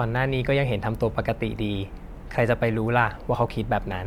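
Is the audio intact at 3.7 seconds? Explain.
Yes, the speech at 3.7 seconds plays through intact, with no fault audible at that moment.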